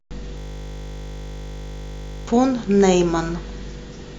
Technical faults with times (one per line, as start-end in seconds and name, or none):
0.38-2.27 system hang loop